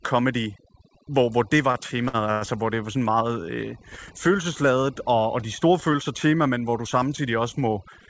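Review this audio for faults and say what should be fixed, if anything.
Overdone noise removal runs through the whole speech clip. The suppressor pushes individual frequency bands almost to zero wherever they sit near its noise estimate, so quiet parts of the voice vanish too. The background drops to near silence with twinkling specks. On a spectrogram, the floor goes nearly black, scattered with isolated bright dots, and the harmonics show ragged holes. Lowering the reduction strength or raising its floor would prevent this.

Three short stalls from a late packet occur, the first two following "hvor hvor det var": 1.72 to 1.76 s, 2.08 to 2.16 s, and 2.32 to 2.43 s. The jitter buffer ran dry each time, so the last sound was stretched by about 24, 53 and 94 ms before playback resumed where it left off. Nothing is lost, but sounds hang on with a slight buzz or dip. The waveform shows repeated, periodic-looking cycles, and the spectrogram shows frozen, smeared horizontal bands. 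A deeper or adaptive jitter buffer would prevent this.

The call path's G.722 coding cuts everything above 8 kHz, which shows as a flat ceiling on the spectrogram.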